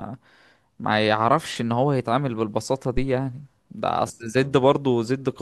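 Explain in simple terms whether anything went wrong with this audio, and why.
At about 2.97 seconds the speech is interrupted by a short, deep thump that is gone by about 3.09 seconds. This is a phantom power thump. The microphone's power supply was switched on or off while the input was live, and that sudden jump in voltage came through as a low knock. It dies away in roughly 26 milliseconds.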